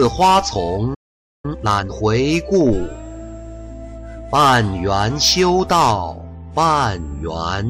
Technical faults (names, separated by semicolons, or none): playback stall; time-compressed catch-up